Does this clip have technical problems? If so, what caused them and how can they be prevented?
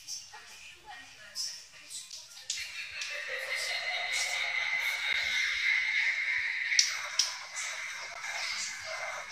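Yes. The clip has a gap between chunks, heard as three short holes at 2.12 s, 5.13 s and 8.14 s, each about 13 ms long and spaced about 3.01 s apart. The audio arrives in 3-second blocks, and silence is inserted at each join rather than replacing any sound, so the material resumes intact after every dropout. To prevent it, trim codec padding and schedule each chunk to start gaplessly at the end of the previous one.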